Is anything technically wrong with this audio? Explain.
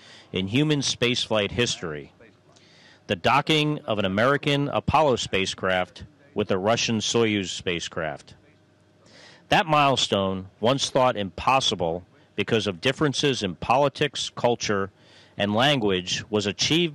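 Yes, there's hard clipping throughout. The signal was pushed about 6 dB beyond what a stage could pass, so its loudest peaks got sliced flat. Only a small fraction of the audio, under one percent, hits the ceiling, so you hear crackle on peaks rather than constant fuzz.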